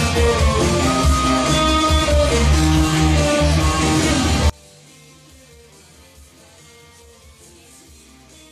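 The audio has two faults. At 4.10 s compressed frames were skipped: roughly one frame of about 23.2 ms went missing or was rejected by the decoder, so the sound jumps ahead by about 20 ms. From 4.50 s to the end, the mono sum drops by about 30 dB and centred content nearly disappears, leaving only a faint residue of whatever differs between left and right. The likely cause is one channel inverted, so the shared material cancels when the channels are combined.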